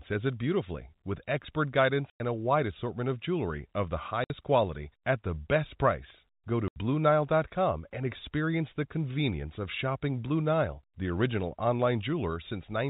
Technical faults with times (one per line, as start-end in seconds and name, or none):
2.10-2.20 packet loss filled with silence
4.24-4.30 packet loss filled with silence
6.68-6.76 packet loss filled with silence